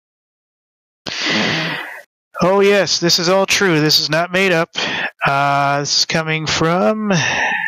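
All the way through there's gain pumping: the gain swings about 25 dB around loud moments, likely from a fast limiter clamping overdriven gain.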